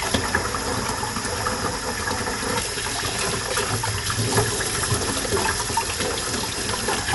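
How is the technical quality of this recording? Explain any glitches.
The technical quality is limited by plainly audible codec damage that runs through the whole recording of everyday sounds. Nothing is present above about 11.5 kHz, so the top end is cut off and the sound is dull. Around tonal parts there is a rough, fluttering noise. This points to Dolby Digital compression at a low bitrate, likely around 64 kbps. The encoder narrowed the band and left many frequency lines without mantissa bits, so the decoder filled them with dither noise. A simple low-pass filter would only sound dull. The noisy flutter over a hard band limit is what marks this as AC-3-style coding.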